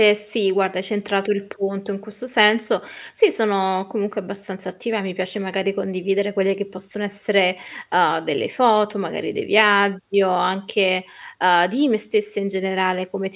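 No faults can be heard anywhere in this recording.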